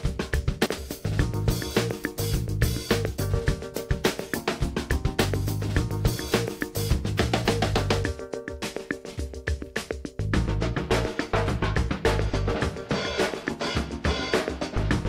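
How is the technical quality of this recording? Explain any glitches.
The recording has one glitch near the start. From 0.66 to 0.78 s there are chunks out of order: a 60 ms chunk arrived one chunk late and plays after its successor. Nothing is missing, but the swapped order creates three hard joins, heard as a brief jumbled stutter.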